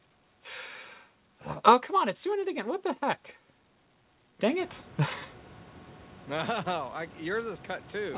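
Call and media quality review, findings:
No call or media quality findings; the room noise that rises about halfway through belongs to the recording, and nothing above 4 kHz is expected from the narrowband G.711 A-law call path.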